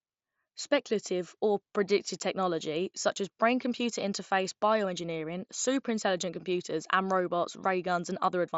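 No technical faults occur anywhere in the speech, which comes through a Bluetooth mSBC headset link with the wideband character that codec gives.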